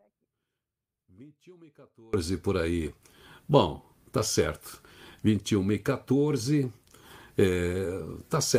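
The clip opens in an audio dropout to a faint residue that's already under way: until about 2.14 s you only get a faint leak of the sound, roughly 30 dB below normal, then it snaps back abruptly. That's likely a broken feed upstream while the downstream path stayed live.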